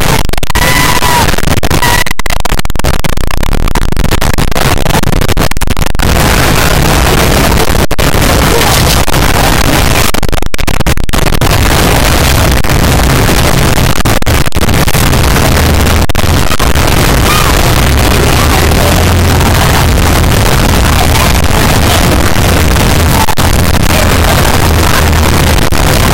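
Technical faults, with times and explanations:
throughout, float read as integer: loud, harsh, near-square waveform at an almost fixed, high level, with background noise as loud as everything else; likely 32-bit float samples read as 32-bit integers.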